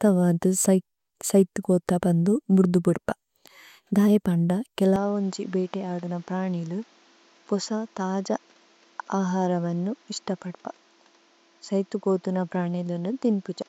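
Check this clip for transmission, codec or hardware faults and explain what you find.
From 4.96 s, right after "ഢാഇ പണ്ഡ", the speech abruptly turns duller and slightly quieter, with nothing above 7.6 kHz and a faint new hiss beneath it, with no gap at the change. This is an input switched to a poorer device, likely a narrower-band microphone.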